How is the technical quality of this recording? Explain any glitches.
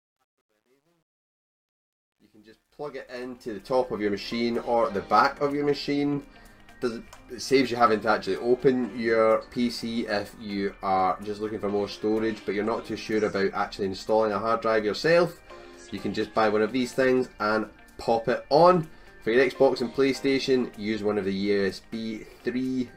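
The opening fade-in is flawed. From 0.0 to 4.01 s it sounds gritty, worst between 0.0 and 2.53 s. This is truncation distortion on a fade. The level stage drops low bits without dither, which fits about 11 bits, so quiet passages collapse into coarse square steps until the distortion ends at 4.01 s.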